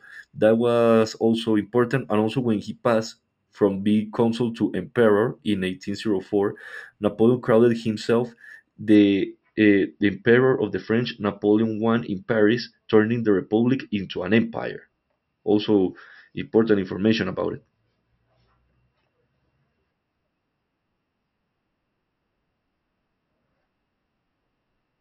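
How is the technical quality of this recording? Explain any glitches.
The first 8.95 seconds carry one fault. Imaging from linear upsampling, 0 to 8.95 s: speech raised from 12 kHz to 44.1 kHz by straight-line interpolation dulls the top and leaves images from 6 kHz to 12 kHz, around 35 dB down, heard as faint metallic shimmer on sibilants.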